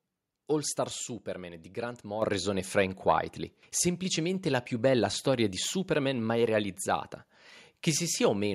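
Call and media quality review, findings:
Microphone volume stepped up at 2.22 s. Speech and room noise jump together by about 7 dB in one hit, no ramp. Probable component: call app's automatic mic gain writing to the device input level. It decided the mic was too quiet and bumped the hardware volume, so everything after that point is just louder.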